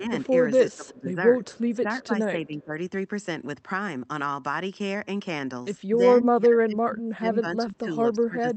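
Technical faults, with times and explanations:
0.00–0.27 s, 0.49–2.78 s and 5.95 s to the end, speech suppressed in double talk: the voice dips, deepest near 15 dB mid-clip and around 25 dB at the end. This is likely an echo canceller hearing both sides at once and turning everything down.
0.72–0.76 s and 1.45–1.76 s, echo leak: a very faint copy of the voice returns 297 ms late, a short scrap and then a longer stretch. This is likely loudspeaker sound an echo canceller failed to remove and sent back.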